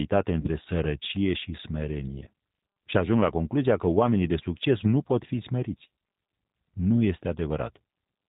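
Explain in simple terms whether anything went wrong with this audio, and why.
Two things went wrong. The whole clip runs through the G.729 codec, a low-rate phone codec that rebuilds speech from a rough model of the voice. Everything above 4 kHz is gone, so the speech sounds muffled, a bit rough and slightly synthetic throughout.

The second problem is VoIP packet loss concealed by the speech codec, from about 0.41 to 0.48 s. Around 40 ms of audio never arrived, so the decoder guessed by stretching the last bit of sound into a fading buzzy or noisy smear, and the voice stays weak for a moment after.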